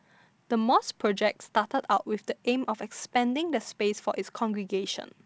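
Nothing here stands out as a fault: the speech simply comes through G.722 wideband telephone coding at its full 64 kbit/s, where the codec leaves at most a faint trace.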